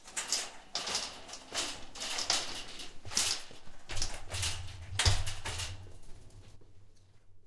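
No technical faults can be heard anywhere in this recording; the signal stays continuous and steady throughout.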